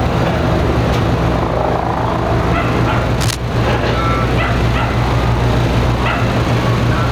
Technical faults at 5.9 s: gain pumping

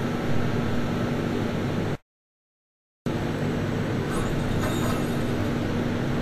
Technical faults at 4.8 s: Vorbis compression

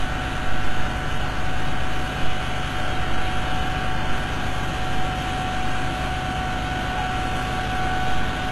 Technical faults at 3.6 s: HE-AAC compression

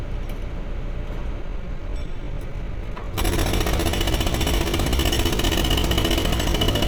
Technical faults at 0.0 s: none

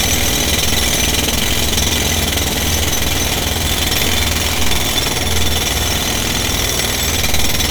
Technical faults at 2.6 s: none

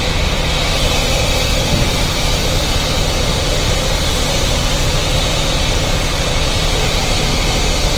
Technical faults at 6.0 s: Opus compression

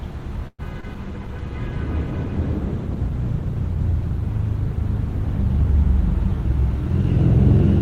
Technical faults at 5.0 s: call bitrate drop

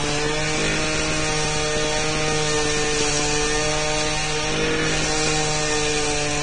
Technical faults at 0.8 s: Vorbis compression; train of clicks

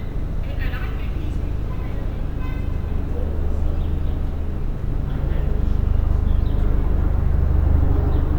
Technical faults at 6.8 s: crude rate conversion

